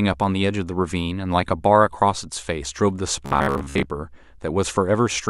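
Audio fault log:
3.26–3.90 s, Bluetooth stutter: late or lost packets made the receiver replay its last short slice of speech, giving a buzzing, machine-gun repetition. About 435 ms went missing across 640 ms, the longest run 73 ms. Unlike a dropout, the gaps fill with repeats rather than silence, and speech resumes further on.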